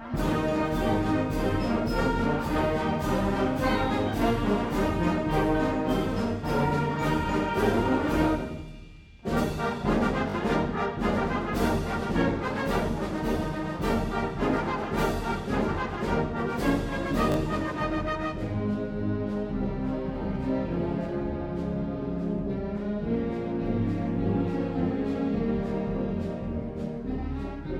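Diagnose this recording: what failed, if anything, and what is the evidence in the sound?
A repeated buffer at the driver stage. At 10.30 s and 17.32 s, a 20 ms fragment replays twice with hard joins, a 40 ms stutter. Late data forced replay.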